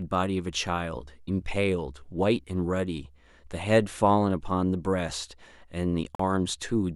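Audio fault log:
6.15–6.20 s, Bluetooth dropout: the speech cuts to silence for about 44 ms, then resumes farther along as though it had kept playing. This points to three or so packets likely missing their delivery deadline to the headphones. Unlike a stall, nothing is delayed or repeated; a slice of sound is simply gone.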